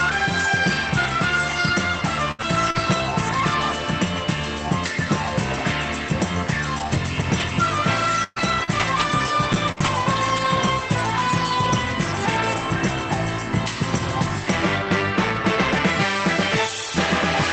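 From 2.31 to 2.42 s the sound stretches into a held, fading continuation, then resumes slightly further on. This is a burst of packet loss. The receiver extended the last audio for 71 ms while 40 ms went missing outright, shifting playback by 31 ms.

Overlapping its tail, from 2.39 to 2.43 s, and again from 2.74 to 2.78 s, the audio turns briefly rougher and noisier without any gap. Each is a lost packet rebuilt from error correction: 40 ms replayed from the low-bitrate Opus copy carried in the following packet.

Between 2.71 and 2.77 s there is a brief smear or wobble. This is a short concealed packet loss. About 40 ms never arrived in time, and the decoder extrapolated 39 ms from the preceding sound before blending back into the real signal.

From 6.78 to 9.88 s, scattered short gaps produce roughly five hiccups and ticks. The longest is about a tenth of a second, and around 7% of that stretch is patched continuation. 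In total 200 ms went missing and 360 ms was rebuilt from error-correction copies, all passing through the Opus call path whose top end stops near 8 kHz.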